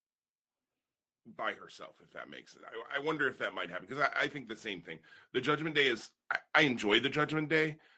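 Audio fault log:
2.11–7.6 s, automatic gain rising: just after "by herself if", the level starts climbing and keeps swelling over more than five seconds, about 12 dB in total. The gain control judged the input too quiet and raised its gain slowly, so speech and background noise lift together. The call path's Opus coding, with nothing above 8 kHz, can also be heard.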